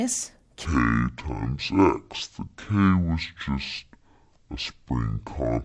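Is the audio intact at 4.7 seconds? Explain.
No, at 4.7 s the sound is under a wrong sample rate fault running from 0.65 s to the end. The audio plays at half speed and an octave low, which fits 44.1 kHz material played at about 22 kHz. Unlike a time-stretch or pitch-shift, speed and pitch drop together.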